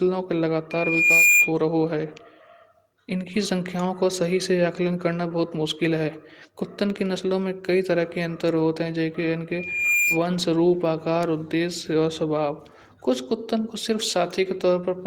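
Loop gain from microphone to loudspeaker exceeded one at 2.4 kHz, causing loudspeaker feedback squeal at 0.71–1.52 s and 9.51–10.23 s: a tone swelling over about half a second, louder than the speech.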